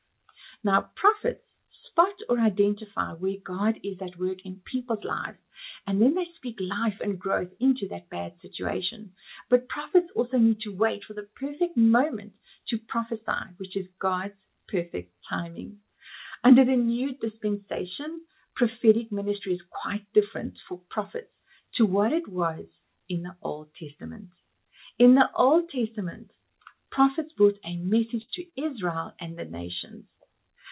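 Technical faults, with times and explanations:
28.22 to 28.30 s, burst of packet loss: about 60 ms of audio failed to arrive in time, so the receiver extended the last received sound for roughly 63 ms and faded it down across the hole. The gap is heard as a brief held buzz or fading hiss, followed by an abrupt resumption that skips the missing portion. The call path is narrowband, with nothing present above 4 kHz, consistent with G.711 A-law.
28.50 to 28.54 s, short concealed packet loss: roughly 20 ms went missing, and the decoder bridged it with around 18 ms of synthesized continuation before cross-fading back into the real signal. Because the fill carries forward the preceding pitch or noise shape, the result is a brief smear or small wobble rather than silence.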